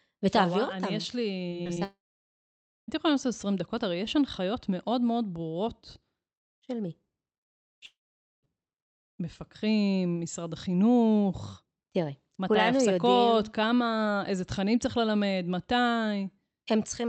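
From 1.49 to 1.78 s there is repeated packet loss with a robotic sound: four short gaps, the longest 23 ms, are each bridged by extending the preceding audio. Roughly a quarter of that span is concealed, giving choppy, robotic speech with fragments missing.

Almost immediately after, from 1.84 to 2.90 s, the audio cuts out, most likely from a long network dropout. A brief fading continuation of the last sound gives way to about 0.9 s of silence, and speech resumes with that section lost. The same happens again from 7.86 to 8.45 s, with about 0.49 s of silence after the short fill.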